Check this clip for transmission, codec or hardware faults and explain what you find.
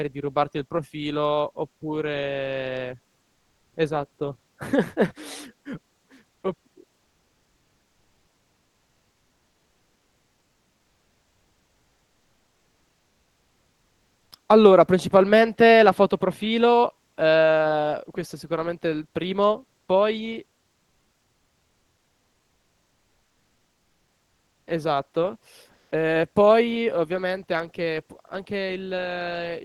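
Two kinds of transmission fault are audible, both pointing to discontinuous transmission in the call codec.

Comfort noise in place of the background appears at 3.33–3.73 s, 6.35–6.43 s and 25.71–25.91 s. During these pauses the real background gives way to a flat, featureless hiss, about 11 dB quieter in the first two and about 5 dB louder in the third. This is likely the receiver synthesising noise while the sender transmits nothing.

An onset clipped by the voice detector occurs at 3.70–3.73 s, at the end of the first comfort-noise stretch. The sender's detector reacted late, so about 30 ms of the returning speech never arrived, and the sound begins abruptly, without its soft attack.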